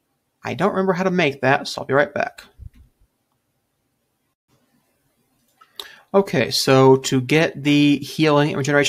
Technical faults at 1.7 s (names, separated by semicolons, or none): none